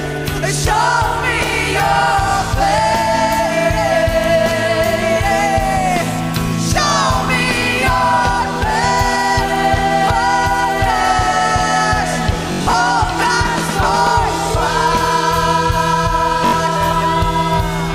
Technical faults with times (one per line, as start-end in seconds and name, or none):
12.52-12.74 Bluetooth stutter
16.46-16.53 Bluetooth stutter